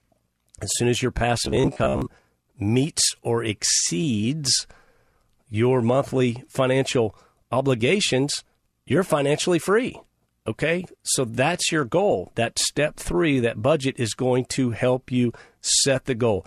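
Speech clip with robotic sound from repeated short buffers between 1.45 and 2.02 s, after "soon as your" and before "meets or exceeds": a rigid metallic buzz at 66.8 Hz, likely from late-arriving audio causing roughly half the segment to be repeated, consistent with a buffer of about 15 ms.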